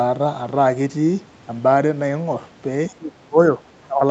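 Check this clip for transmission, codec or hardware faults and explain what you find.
Two short dropouts appear in the speech near the end. From 2.89 to 3.38 s and again from 3.86 to 4.03 s, the level sinks sharply, by about 25 dB and about 20 dB. The likely cause is speech suppressed in double talk: the echo canceller could not separate the talker from loudspeaker echo and attenuated both.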